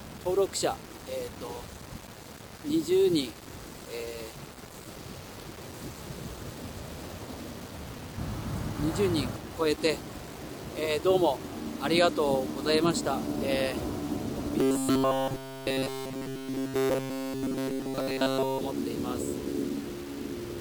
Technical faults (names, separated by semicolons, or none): low bit depth without dither; robotic sound from repeated short buffers